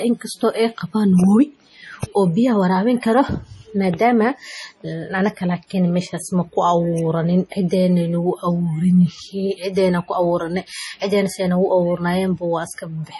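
An encoder short of bits, likely MP3 compression at a low rate around 32 kbps, cuts everything above 11.5 kHz and drops weak frequency lines frame by frame, so throughout the speech the treble is dull and the sound turns heavily watery and swirly, with chirpy s sounds and smeared attacks.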